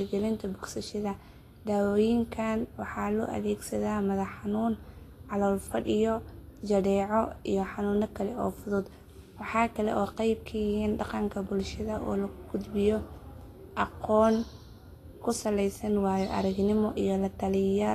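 Throughout the speech, the treble sounds hissy and grainy, consonant attacks are smeared, and nothing reaches above 14.2 kHz. This is likely Vorbis compression at a low rate, fitting roughly 35 kbps, where coarsely quantised high-frequency detail turns into noise-like texture.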